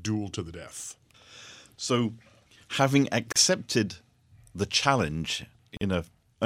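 Gap at a join of encoded pieces, at 3.32 s and 5.77 s: leftover encoder start delay and end padding cut the speech for 36 and 44 ms.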